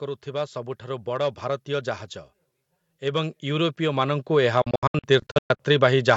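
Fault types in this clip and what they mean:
Hard clipping: Throughout the speech the signal is driven about 6 dB past the ceiling of a stage in the chain, so the highest peaks are sliced flat instead of rounded. Only a small fraction of samples reach that limit, so it is heard not as constant fuzz but as brief crackle and grit on the loudest syllables. The squared-off tops add harmonics high in the spectrum, up to the 8 kHz top of the call band.
Automatic gain rising: Twice the gain control judges the input too quiet and turns it up gradually, so the voice and the background noise floor swell together. The first rise runs from 0.05 to 1.97 s and adds about 5 dB. The second, from 3.0 to 6.05 s, is larger at about 10 dB and makes the later part of the clip noticeably louder and noisier.
Bluetooth dropout: Between 4.62 and 5.60 s the speech breaks into a series of abrupt silent holes, about 0.51 s of sound missing in total, scattered across nearly a second. 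The longest single gap is 0.12 s. When sound returns it has moved on, as if it kept playing during the gaps, not pausing. This is likely a wireless link failing to deliver audio packets to the headphones in time, with a couple of dozen packets discarded.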